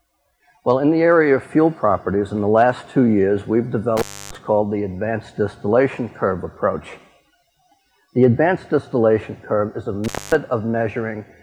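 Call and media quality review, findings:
Intermittent contact, 3.97–4.35 s: sound drops out for about 0.29 s, crackle at both edges, faint hiss during the gap. Probable loose cable or plug briefly opening the line.

Intermittent contact, 10.04–10.35 s: same symptom, open for about 0.24 s.

Waveform: abrupt collapse to near-flat, spiky clicks at entry and exit. Spectrogram: broadband vertical streaks at the edges, low even noise floor between them.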